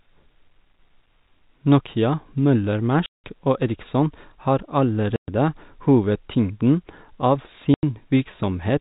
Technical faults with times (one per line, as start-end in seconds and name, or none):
3.06-3.23 packet loss filled with silence
5.16-5.28 packet loss filled with silence
7.74-7.83 packet loss filled with silence